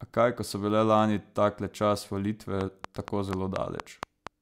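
A train of clicks runs from 2.61 s to 4.28 s, starting just after "bile lani takle čas". About seven near-identical pulses arrive at a steady 4.2 per second, each standing well above the speech level. Such a regular, repeating impulse is likely interference coupling into the signal chain from nearby equipment, or a faulty connection or power supply. It is heard as sharp, evenly paced ticking laid over the speech, and it continues through the pauses.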